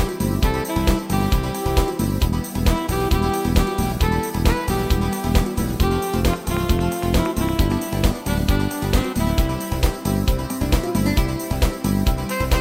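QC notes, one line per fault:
6.34–7.73 s, train of clicks: about seven near-identical pulses tick over the sound at a steady 4.3 per second, peaking around 10 dB above the program, likely from electrical interference or a faulty connection or power supply.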